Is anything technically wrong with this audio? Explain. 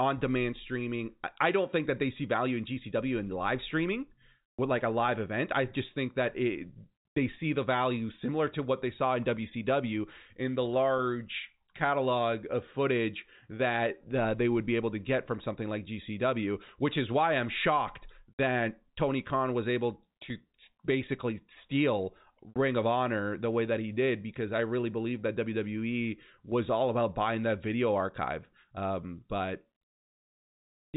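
No, nothing in this speech clip is technically wrong. It has the sound of G.711 telephone coding, with nothing above about 3.8 kHz and only a faint level-following hiss from the 8-bit logarithmic scale.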